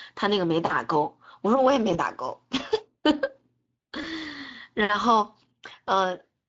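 From the start, the speech carries the plainly audible coloration of the Speex codec, a CELP coder whose excitation is starved of bits at this setting. Voiced sounds turn hoarse and noisy. The damage fits a rate of roughly 20 kbps. It is steady across the whole clip, unlike the brief faults that follow.

At 1.93 to 1.98 s, 4.01 to 4.05 s and 5.69 to 5.72 s there is VoIP packet loss concealed by the speech codec. Each time, about 20 ms of audio is missing, which points to a single lost frame. The decoder fills each hole by repeating its last pitch and filter at falling gain. The result is a short buzzy or noisy smear with a brief weak patch after it, not a hard click or a silent gap.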